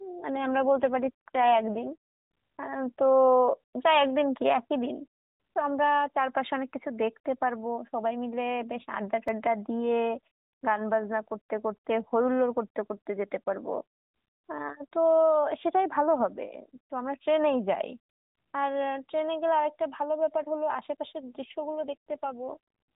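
Speech passed through the AMR narrowband mobile codec, with nothing above 4 kHz and only light coding roughness, twice turns buzzier and more synthetic, from 0.35 to 1.95 s and from 21.52 to 22.57 s, with no gap and no change in bandwidth. This is an AMR rate drop: the roughness fits the codec stepping down from 12.2 to about 5.9 kbps, fewer bits for the voice, before returning to its normal rate. At 9.28 s a repeated buffer produces a tiny click or buzz: one very short block, which fits a 64-sample buffer, plays a second time with hard joins because fresh audio arrived late, costing well under two milliseconds of sound.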